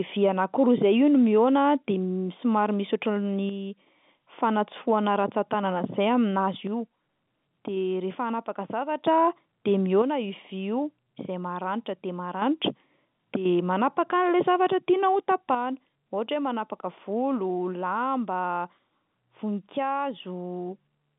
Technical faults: one channel drops out

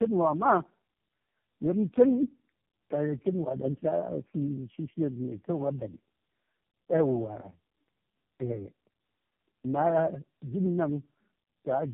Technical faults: tandem speech coding

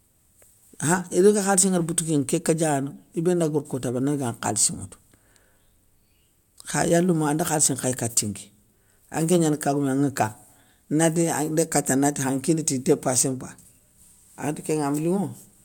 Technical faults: none

